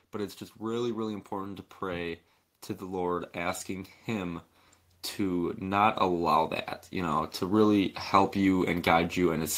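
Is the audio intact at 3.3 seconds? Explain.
No, 3.3 s falls within an automatic gain rising from 2.79 to 4.48 s: the gain control slowly lifts level about 3 dB, swelling speech and background together, seen as a gradually widening waveform envelope.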